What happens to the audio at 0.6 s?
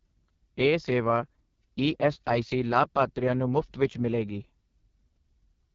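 At 0.6 s the speech is passing through the AMR wideband (HD Voice) codec, which runs for the whole clip at what sounds like its 6.6 kbit/s lowest rate. Coarse vocal-tract modelling renders the voice rough and raspy, with nothing above about 7.3 kHz.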